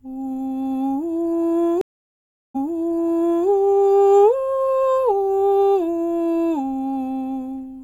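A music clip with a stream reconnect between 1.81 and 3.47 s. The music stops for about 0.73 s. The connection dropped and the player restarted its decoder mid-stream. Playback resumes 0.93 s earlier, repeating music already heard, as the server resent buffered audio.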